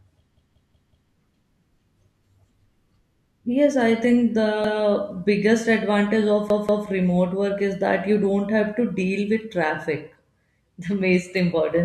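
At 0.37–1.12 s, 4.64–4.83 s and 6.50–6.87 s, a repeated buffer replays the same 186 ms chunk, which fits an 8192-sample buffer, four, one and two extra times. The result is a hard-joined stutter, not the silent gap of a dropout.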